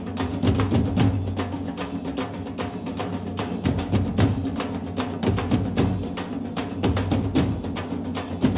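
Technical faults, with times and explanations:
No faults turn up here; the audio just carries the narrow sound of a normal phone-style call path, with nothing above about 4 kHz, which fits a G.711 mu-law codec at 64 kbps.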